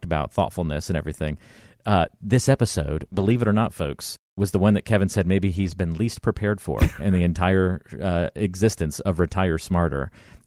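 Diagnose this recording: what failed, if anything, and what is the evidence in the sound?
Network stage, scattered short gaps between 2.07 and 3.39 s, ending just before "it or not folks". About three brief holes, the longest around 20 ms, where the receiver extended the preceding sound to cover 60 ms of lost or late audio.

Network and codec stage, lost packet rebuilt from error correction at 5.55–5.73 s, right after "said maybe". There is no gap, but about 100 ms turns rougher and noisier. That fits Opus in-band forward error correction, with the decoder playing low-bitrate copies carried in the following packets.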